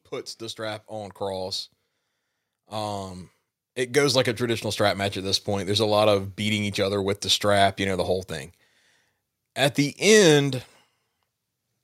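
From 0.56 to 1.6 s, and again from 3.92 to 5.8 s, automatic gain rising lifts the level by about 4 dB and then about 5 dB. The gain control judged the input too quiet and raised it gradually. Voice and background noise swell together, which separates this from a talker moving closer.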